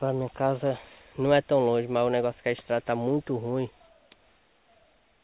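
No technical faults can be heard anywhere in the clip. It has come over a working call path, and the absence of anything above 4 kHz, with the fine grain of companding noise underneath, fits a G.711 mu-law codec at 64 kbps.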